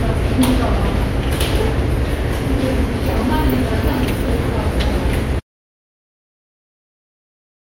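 The audio input was most likely lost, through a dropped link or device, while the recorder kept writing silence, causing an audio dropout to silence in this recording of sounds. At 5.4 s the sound cuts off mid-flow into silence, with no room tone, lasting to the end.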